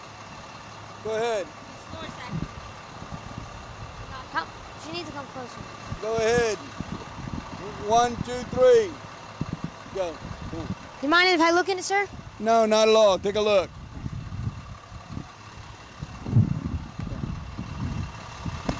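No technical faults heard.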